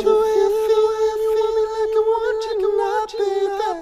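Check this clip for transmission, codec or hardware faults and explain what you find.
One fault is present. A doubled audio track runs throughout: a full-band copy of the sound trails the original by roughly 0.7 s, about as loud, with no decay or room colour. This likely comes from a second, slower capture path or an edit holding two offset copies.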